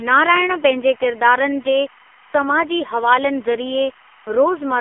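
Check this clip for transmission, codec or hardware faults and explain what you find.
Two faults run through the whole speech clip: a timecode bleed and heavy AMR narrowband mobile codec damage.

The timecode bleed lasts the full clip. Linear timecode from a nearby track or cable is leaking in, roughly 30 dB under the speech. Its square wave flips between tones near 1 and 2 kHz, and at 25 frames per second it makes a steady chirpy warble behind everything.

The AMR narrowband mobile codec damage is also present throughout. The audio has been squeezed through AMR-NB: the band sits around 300 Hz to 3.5 kHz, with nothing above 3.6 kHz. The codec rebuilds speech from a vocal-tract model and a few pulses per frame, and here the damage is heavy, which fits a low-rate mode around 6 kbps. The voice comes out buzzy and synthetic.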